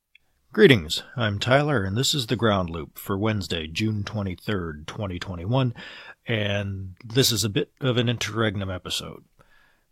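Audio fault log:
No technical faults are present, and the speech signal stays continuous and intact across the whole recording.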